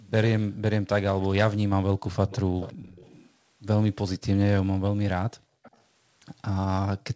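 It's a speech recording with a faint delayed copy of the talker trailing behind them, lagging by 352 ms. That's most likely an echo leak, where the far end was on a loudspeaker and its echo canceller let part of the pickup slip back down the line. You hear it as brief scraps at 1.23 s and 2.29–2.4 s, then a longer stretch from 2.6 to 3.3 s, sitting about 20 to 25 dB under the speech. A quieter bit follows at 5.63–5.8 s, around 30 dB down. Just before that last one, between 5.39 and 5.63 s, the room sound collapses by up to about 40 dB for roughly a fifth of a second. That's background gated by the echo canceller: it clamped the microphone hard while the loudspeaker was active, then released it. The audio tops out at 8 kHz throughout, which fits the G.722 call path it went through.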